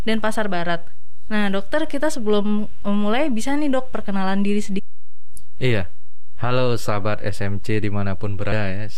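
Throughout the speech there is no audible sign of it, but the waveform sits shifted away from zero by a constant amount, a DC offset. That fixed bias eats into headroom and shows up as steady energy at the very bottom of the spectrum.

At 4.78 s and again at 8.51 s, a brief glitch cuts through, each lasting barely more than 10 ms. Both are damaged data in a compressed stream: corrupted bytes make the decoder misread frames and lose sync until it finds the next valid header.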